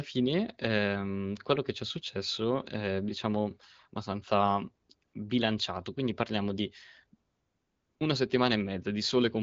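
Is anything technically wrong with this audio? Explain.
Yes. AMR comfort noise replaces the real background twice: for 60 ms at 5.07–5.13 s, between "successo è diciamo abbastanza" and "bilanciato quindi parliamo di", and for 700 ms at 7.29–7.99 s, after "bilanciato quindi parliamo di". The sender judged these moments silent and stopped transmitting speech frames. The receiver then synthesised noise from a coarse level-and-spectrum description, so a smooth, steady hiss switches in and out. The light wideband coding fits AMR-WB at 12.65 kbit/s.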